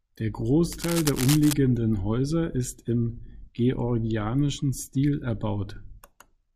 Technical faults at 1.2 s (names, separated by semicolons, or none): cable scratch noise